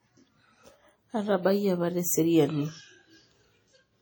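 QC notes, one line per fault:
throughout: WMA compression. The speech rings and smears, with hiss that breathes with it. Likely heavy transform coding, which fits a bitrate near 32 kbps.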